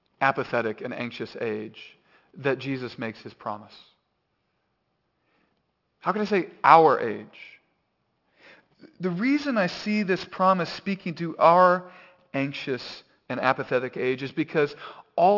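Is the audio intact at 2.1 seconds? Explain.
No. At 2.1 seconds the speech carries aliasing, present across the whole clip. The sound was resampled to what fits a 12 kHz rate without first removing energy above 6 kHz, so those frequencies fold back below 6 kHz as unrelated, gritty, metallic tones around sibilants, roughly 25 dB under the speech. A clean band limit would sound dull but smooth. Here the spectrum runs hard up to 6 kHz and carries inharmonic grit.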